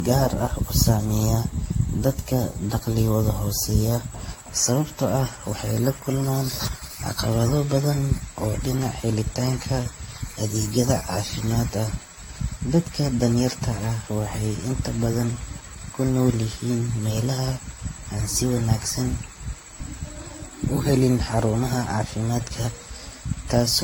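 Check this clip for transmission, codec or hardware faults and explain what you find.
One fault runs through the whole speech recording: generation loss. It sounds swirly, hollow and smeared, with blurred attacks, likely from around five AAC-LC re-encodes near 64 kbit/s. On a spectrogram there are spreading holes and nothing above 16.6 kHz.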